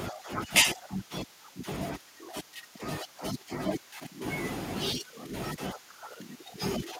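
Echo leak runs through the speech at 0.12–0.49, 0.76–1.62, 1.99–2.78, 3.08–3.59, 3.78–3.93, 4.96–5.27 and 5.76–6.58 s. A faint copy trails 184 ms behind, about 25 to 30 dB down. A loudspeaker echo canceller likely let it through.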